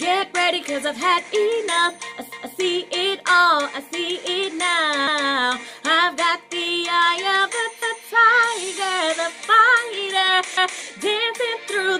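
At 2.32, 5.07, 7.82 and 10.57 s the sound stutters: a quarter-second piece plays twice, each lasting to about 2.58, 5.33, 8.08 and 10.83 s. These are overlapping chunks. The audio was handled in blocks of about 2.5 s, and each block started 250 ms before the previous one ended, so every join repeats that slice. That is why the stutter recurs every 2.75 s.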